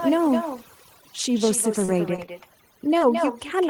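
Overdone noise removal runs throughout. Bands near the noise floor are gated off, leaving twinkling, warbling specks over near silence, seen on a spectrogram as scattered isolated specks. Echo with no canceller is also constant: a quieter, thinner copy returns about a fifth of a second later, about 7 dB down, visible as a quieter delayed duplicate of each waveform burst. Short concealed packet loss hits at 1.85–1.90, 2.16–2.20, 2.26–2.29 and 2.98–3.02 s. Each time, about 20 ms went missing and was filled by extending the preceding sound, heard as a brief smear or wobble and seen as a smoothed, repeated patch.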